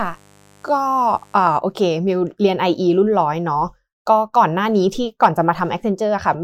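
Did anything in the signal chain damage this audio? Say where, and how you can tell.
Yes: a mains buzz in the analogue wiring, 0 to 1.57 s, a raspy 50 Hz-based buzz roughly 35 dB under the speech, from switching spikes let in by a dimmer, rectifier or missing shield.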